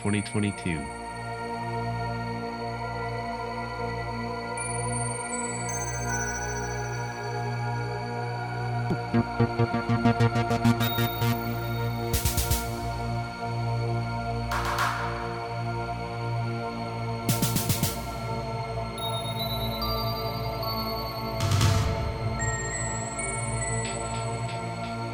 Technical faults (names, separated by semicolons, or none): none